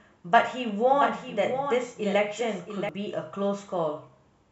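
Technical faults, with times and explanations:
0.93–2.89 s, doubled audio track: a second copy of the speech trails about 0.7 s behind, roughly 10 dB quieter, clean and dry, likely a slower capture path mixed back in.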